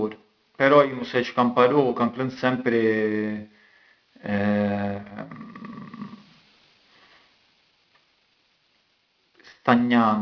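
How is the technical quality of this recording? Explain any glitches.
The recording has an aliasing problem running the whole way through the speech.

Aliasing is present from start to finish. It sounds like the audio was taken down from a high rate to something that fits roughly 11 kHz, with no low-pass filter first. Everything above the 5.5 kHz fold point mirrors back down to unrelated frequencies, landing maybe 30 dB under the speech. You hear it as gritty, metallic sibilants, and the top of the spectrum runs right up to the band edge.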